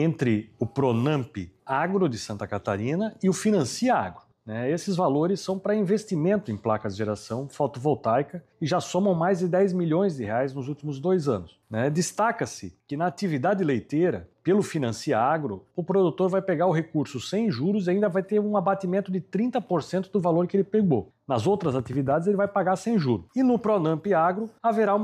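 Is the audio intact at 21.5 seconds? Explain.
Yes, the audio at 21.5 seconds is intact, with no dropout, glitch or other fault at that moment.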